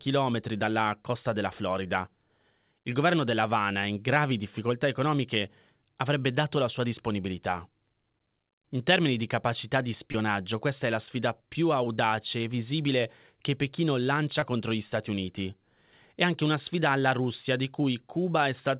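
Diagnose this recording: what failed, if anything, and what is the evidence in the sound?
Brief smears at 10.12–10.16 s (after "termini di capacità di"), 11.96–12.00 s (after "è la sfida più") and 14.40–14.44 s (before "contro gli") are short concealed packet loss. At the network stage, roughly 20 ms of audio arrived too late each time. The receiver bridged the gap by continuing the preceding sound, from its pitch or as shaped noise, then blended back into the real audio. This sits within a call band that stops at 4 kHz, consistent with G.711.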